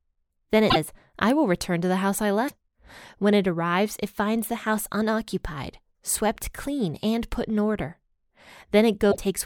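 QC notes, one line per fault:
0.69–0.76 s, 2.47–2.51 s, 9.11–9.16 s: broken MP3 bit reservoir. Brief glitches sit right before "I will return to" and right after "to the house I". Each spans under three 26.1 ms frames. Likely cause: dropped frames left later frames borrowing the wrong bytes.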